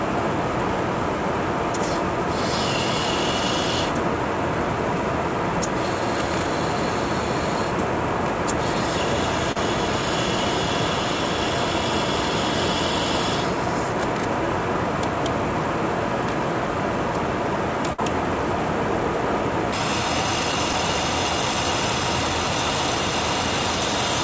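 The audio has passed through a call path, and nothing above 8 kHz survives, which fits a G.722 codec at 64 kbps. Two short concealed packet losses are audible. At 9.52 to 9.56 s, 40 ms of audio is missing and 36 ms of continued sound fills the hole. At 20.73 s, 10 ms is missing and only 4 ms is filled. Each is a brief smear where the receiver extended the last sound. At 17.93 to 17.99 s there is a burst of packet loss. About 60 ms of audio never arrives. The receiver fills 53 ms by carrying the last sound forward and fading it, then jumps ahead past the missing part.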